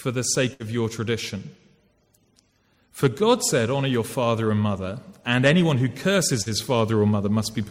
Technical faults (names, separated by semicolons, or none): burst of packet loss; hard clipping; short concealed packet loss